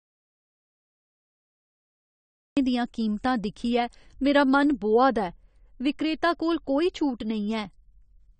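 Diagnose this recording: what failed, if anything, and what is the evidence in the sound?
The recording opens in silence, with no room tone or noise floor, until 2.57 s, when the speech cuts in mid-flow at "दियां कीमतां दिक्खियै मेरा". This is an audio dropout to silence already under way when the clip starts. The cause is likely at the input stage: a disconnected device, a broken link or a stray mute, with the recorder still writing silence. Whatever was said before 2.57 s is gone.

Throughout, the speech sounds dull and smeared, with nothing above 9 kHz and a warbling, fizzy texture on sustained sounds and sibilants. This plainly audible damage is AAC compression, and the likely stage is the codec. AAC-LC at a starved rate, which fits about 32 kbps, drops the upper band and quantises the remaining frequency lines coarsely, leaving holes in the spectrum.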